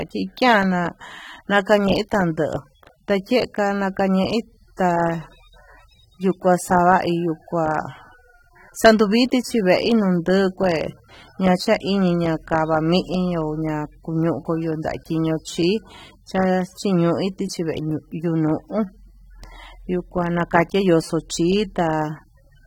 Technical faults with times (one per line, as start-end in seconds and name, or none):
0.00-22.66 AAC compression